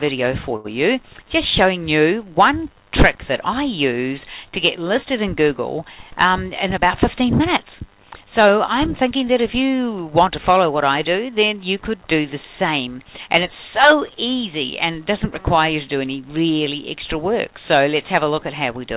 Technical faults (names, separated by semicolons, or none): short stall from a late packet; jitter buffer speed-up